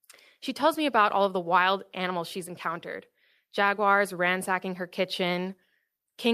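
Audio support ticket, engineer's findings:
No audible faults found on the speech recording; no dropouts, noise or distortion to trace to any component.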